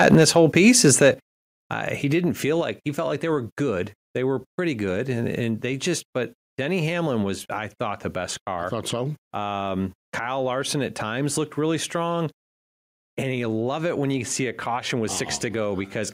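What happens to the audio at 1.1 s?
Microphone overload runs from 0.0 to 1.07 s: the input was driven about 4 dB past the converter's limit, so around one percent of samples are flattened, likely from excessive input gain, giving harsh crackle and squared-off waveform tops. At 1.14 s the microphone volume steps down by about 8 dB, likely software gain control reacting, so voice and background drop together before "uh he didn't feel", a clean step in waveform height and spectrogram brightness.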